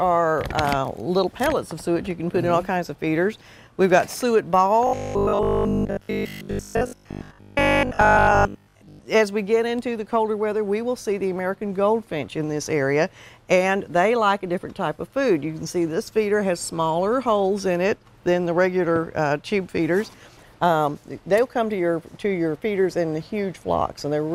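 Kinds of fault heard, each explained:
Robotic sound from repeated short buffers: from 4.87 to 9.01 s the sound turns into a rigid, metallic buzz near 50 Hz that only loosely tracks the original, likely because fresh audio arrived too slowly and the last 20 ms or so was replayed across most of that stretch. A waveform shows one short segment tiling repeatedly, and a spectrogram shows evenly spaced harmonic lines locked at multiples of 50 Hz.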